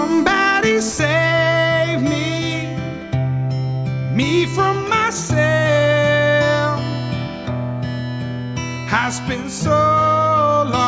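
No technical faults can be heard anywhere in this clip.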